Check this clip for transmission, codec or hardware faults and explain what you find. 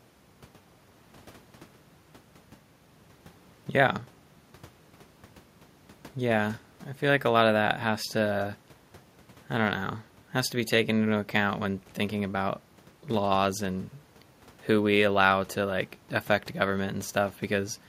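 Nothing stood out on listening to the speech here; no faults were heard.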